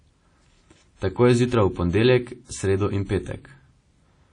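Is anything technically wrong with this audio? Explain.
Yes. Throughout, the speech rings and smears, with hiss pumping alongside it and nothing above 10 kHz. This is likely WMA compression. Long transform blocks spread noise, and a low bitrate near 32 kbps drops weak detail.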